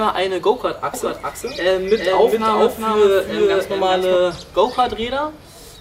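From 0.94 s to 4.16 s a doubled audio track appears: a full-band copy trails the original by roughly 400 ms, a few decibels quieter, likely captured again through a slower path. Unlike an echo, it never decays, and it starts and stops abruptly.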